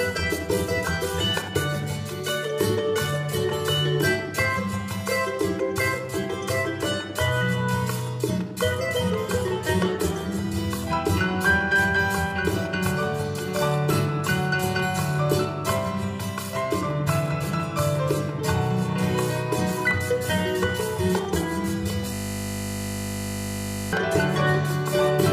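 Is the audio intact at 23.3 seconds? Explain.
No. At 23.3 seconds the clip is inside a system hang loop that runs from 22.14 to 23.93 s. The computer or driver stalled while the sound hardware kept replaying the same 20 ms stretch of its ring buffer, about 89 times in a row. Because the segment is so short, it fuses into a steady 50 Hz buzz rather than a stutter. Unlike a buffer underrun, there are no silent gaps or irregular glitches, only identical repeats at a fixed rate.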